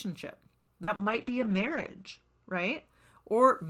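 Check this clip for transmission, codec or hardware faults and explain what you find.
Four transmission faults are audible, all network-related: one late-packet stall, two concealed packet losses and a sustained bitrate drop.

From 0.59 to 0.70 s there is a short stall from a late packet. The jitter buffer ran dry, so the receiver stretched the last sound by 80 ms and then resumed where it stopped. The sound is a held sustain with a slight buzz or dip. Unlike loss, nothing is skipped; the remaining audio simply arrives 80 ms later.

At 0.83 to 0.90 s and again at 0.95 to 1.02 s there is short concealed packet loss. Each time 40 ms of audio never arrived and was replaced by an extrapolation of the preceding sound. It is heard as a brief smear or wobble. Unlike the stall, real content is gone rather than delayed.

From 1.02 to 2.93 s there is a call bitrate drop, from 48 to 9 kbps, holding at the lowest rate for 1.17 s. 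The encoder coded more coarsely and narrowed the bandwidth from 20 kHz to 8 kHz, so the sound becomes rough, watery or muffled. It differs from the dropouts because it is continuous rather than brief.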